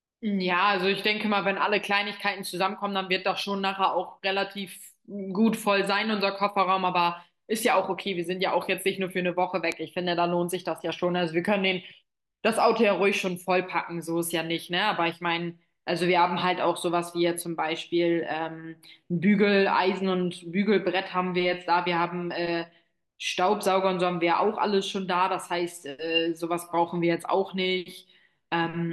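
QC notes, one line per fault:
9.72 s and 16.51 s, bit error spike: a single sharp, broadband tick at each time, loud at about -13 dBFS at 9.72 s and faint at about -37 dBFS at 16.51 s. A flipped bit makes a sample value jump by a power of two and snap back, which fits a run of about three samples at 9.72 s and a single sample at 16.51 s. The tick therefore bears no relation to the speech.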